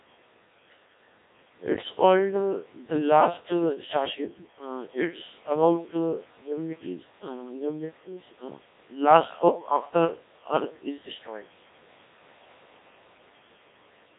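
From start to finish, the speech passes through a Codec 2 vocoder. The heavy damage fits a very low rate, around 1.3 kbit/s. The coder keeps only pitch, voicing, energy and a rough spectral envelope. The decoder then rebuilds the voice from sine waves, so the original waveform is lost. The result sounds robotic and buzzy. The band is confined to roughly 200 Hz to 3.7 kHz, which makes it thin and narrow.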